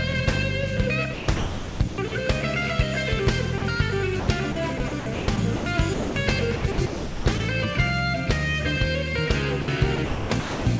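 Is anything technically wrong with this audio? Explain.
Yes. The sound is repeatedly gated, in two related ways. It has also passed through a call codec, and nothing is heard above 8 kHz, which fits G.722.

Sound chopped by the voice detector occurs from 1.14 to 2.12 s, 4.20 to 5.66 s, 6.56 to 7.40 s and 9.96 to 10.66 s. The likely cause is the sender's voice detector toggling between sending and muting several times within each stretch. Quiet parts are swapped for synthetic comfort noise, about 0.72 s of the first stretch and 0.5 to 0.56 s of each later one. The result is choppy.

Sound dropped by the voice detector occurs at 3.58 to 3.62 s, 5.94 to 6.16 s and 9.62 to 9.68 s. Here the detector likely judges quiet sound to be background and simply stops sending. The receiver fills each gap with comfort noise, which lasts 40 ms, 220 ms and 60 ms. The sound gives way to a flat, steady hiss. 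It returns once the detector triggers again.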